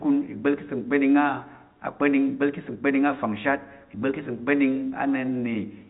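No technical faults can be heard in this speech.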